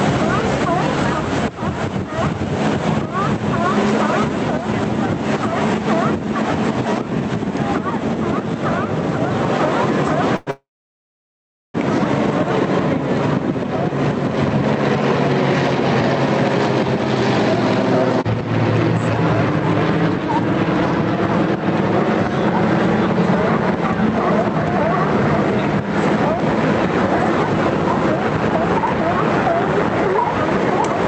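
At 10.36 s the sound stalls in a call audio freeze. It lasts about 0.1 s. The last sound is stretched into a short buzz or hiss, with no silence. It barely ends before a second freeze begins at 10.51 s and runs to 11.77 s. This time the held sound fades quickly, and about 1.1 s of silence follows. The likely cause is packets held up in transit, draining the jitter buffer. When the audio resumes, it carries on from where it stopped. Nothing is lost, but the stream now runs about 1.3 s later.

At 26.40 s there is a repeated buffer. Fresh audio did not reach the device in time, so it played its last block once more. That block is about 1.45 ms long, which fits a 64-sample buffer. A repeat that short is not heard as a stutter. It comes through as a click or brief buzz from the hard join. Only a sliver of audio, around a millisecond and a half, goes missing. The clip passed through an Opus call path, whose band limit of 8 kHz stays the same throughout.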